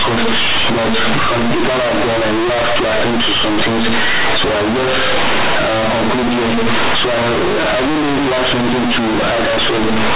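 Speech, with mu-law G.711 telephone bytes read as linear 8-bit samples with no expansion throughout. The logarithmic codes are treated as raw amplitudes, so every sign change jumps across half the range and quiet passages match loud ones. The result is harsh, very loud buzzing distortion with heavy noise filling the pauses.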